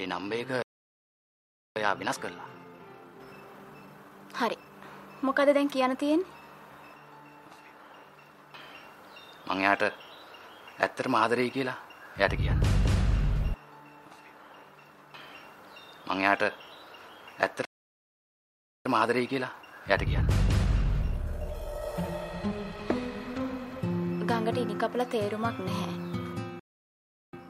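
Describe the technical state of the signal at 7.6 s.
Nothing is wrong with the signal at 7.6 s; the audio is intact there.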